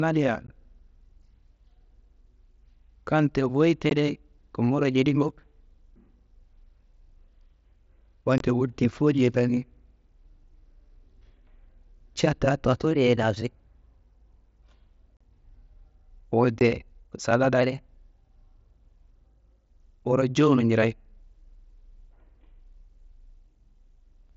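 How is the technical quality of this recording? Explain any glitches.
The recording has two kinds of glitches: brief dropouts and two stretches where the speech runs sharp and fast. It comes through a Bluetooth mSBC headset link, which passes speech up to 8 kHz with light graininess.

Unconcealed Bluetooth headset packet loss hits at 0.47 s, 3.90 s, 8.38–8.41 s, 15.17–15.21 s and 16.59 s. Voice packets between headset and phone went missing and nothing patched the gap. Each hole lasts 15 to 38 ms and has hard edges that can click.

A drift correction step is the likely cause of the shifts at 12.91–13.99 s and 17.61–19.22 s. Clock-matching software changed the playback rate at once to adjust its buffer. Speed rises about 5.9% and pitch nearly a semitone, then snaps back.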